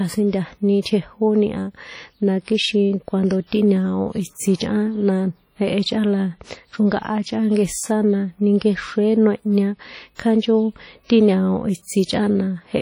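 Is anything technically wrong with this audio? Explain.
Yes. Throughout the speech there is heavy, ringing, washy damage with hiss that swells and fades with the voice. This is likely WMA compression at a low bitrate, around 32 kbps. The long transform blocks smear quantisation noise over tens of milliseconds and zero weak detail, and nothing remains above 19.7 kHz. This differs from broadband noise, which would not track the signal's level.

From 10.15 to 10.19 s there is pre-echo. A sharp attack sits late in a codec block, so noise sized for that loud moment spreads about 40 ms back into the quiet gap before it. The result is a brief hiss leading into a softened onset. Unlike reverb, the smear comes before the sound rather than after.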